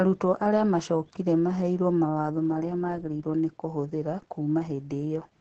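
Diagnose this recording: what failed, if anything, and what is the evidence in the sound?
The codec stage failed: Opus voice compression runs throughout this speech clip. The speech sounds muffled, hoarse and faintly robotic. The damage is heavy, which fits the SILK linear-prediction mode at a very low bitrate, around 10 kbps. SILK models the voice as a filter driven by a coarsely quantised excitation, so fine harmonic detail is lost. On a spectrogram the band is empty above 13 kHz, and the harmonics look smeared and blocky in steps that fit 20 ms frames.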